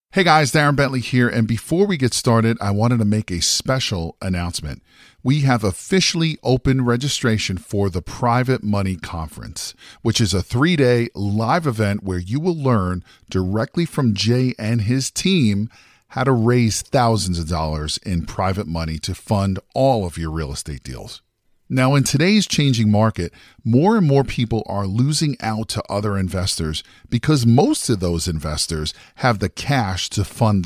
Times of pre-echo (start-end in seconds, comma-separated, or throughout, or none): none